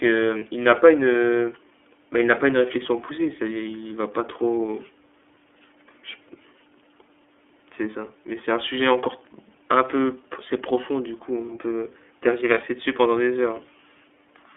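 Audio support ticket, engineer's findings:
iLBC codec, whole clip: narrowband speech, nothing above 3.4 kHz or below 300 Hz, rough synthetic edge plainly audible. Each 30 ms frame's excitation coded independently at 13.33 kbps, which fits iLBC's 30 ms mode.

Lost iLBC frames, 0.39–0.43 s and 12.54–12.58 s: brief held buzzy vowel, 30 ms each. Single lost packet; decoder repeated last pitch cycle with noise. Independent frames, so clean speech resumes immediately after.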